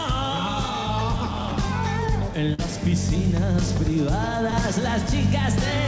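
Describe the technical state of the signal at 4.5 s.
A short concealed packet loss runs from 4.50 to 4.54 s. About 20 ms of the stream failed to reach the decoder in time, and the receiver covered roughly 16 ms of that gap by extending the preceding sound, carrying its pitch forward or substituting shaped noise, before crossfading back into the real signal. It comes across as a brief smear or wobble. Around it, the band stops at 8 kHz, which fits a G.722 call path.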